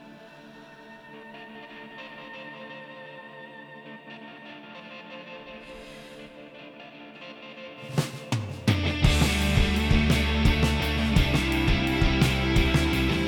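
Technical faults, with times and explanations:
Nothing stood out on listening to this clip.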